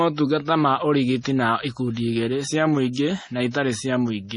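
Heavy MP3 compression is the likely cause throughout: the encoder was starved of bits, which fits a bitrate around 32 kbps. It cut everything above 10.6 kHz and switched weak frequency lines on and off, leaving the speech dull, watery and swirly, with metallic chirps on s sounds.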